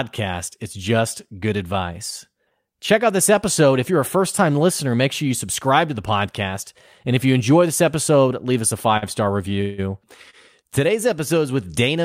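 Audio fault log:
8.97–9.04 s and 10.30–10.35 s, short stall from a late packet: a speech packet arrived late, so the receiver held the last sound for 47 ms and then 29 ms before resuming at the same point. Nothing is lost, but each sound is briefly drawn out with a faint buzz or dip.
9.61–9.80 s, call audio freeze: the speech halts and the last sound is carried on as a fading buzz or hiss for 170 ms, never dropping to silence. This likely comes from packets delayed in transit emptying the jitter buffer. Playback then resumes exactly where it stopped, adding a gap rather than dropping audio.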